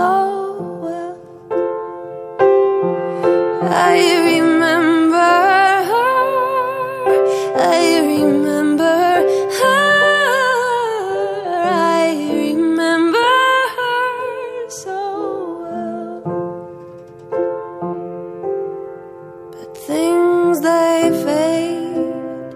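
There are no technical faults to describe in this clip, so there is nothing to place in time order.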